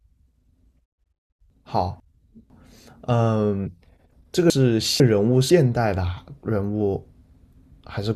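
At 1.5 to 2.5 s and again at 4.5 to 5.5 s, chunks out of order: a 500 ms chunk plays one chunk late, so the speech jumbles briefly.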